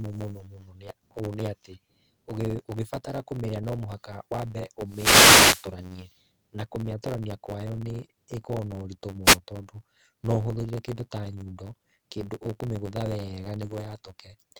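From start to finish the speech carries a block size mismatch (truncated). One stage writes blocks longer than the next reads, so the tail of each block is discarded. That produces a steady buzz at 91.9 Hz and speech running 1.07 times fast at roughly normal pitch, which fits 512-sample written blocks.

From 4.86 to 5.72 s and again from 9.24 to 9.38 s there are wireless microphone noise hits. The FM radio link fades as reflections cancel, receiver noise rises, and each dropout is heard as a burst of hissing static over the speech.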